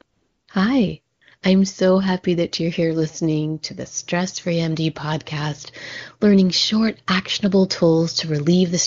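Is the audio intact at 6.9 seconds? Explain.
Yes, the speech at 6.9 seconds is intact, carried cleanly by the AMR wideband (HD Voice) codec at 23.85 kbit/s with no audible fault at that moment.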